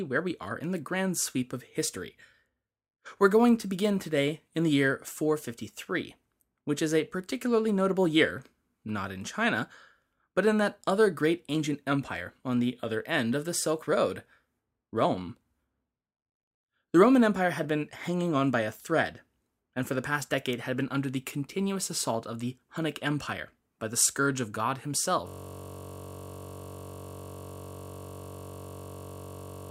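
At 25.28 s a system hang loop takes over and lasts to the end: a 21.33 ms slice, which fits a 1024-sample buffer, repeats about 200 times, giving a steady 46.9 Hz buzz. The waveform shows identical repeating cycles, and the spectrogram shows evenly spaced harmonic lines.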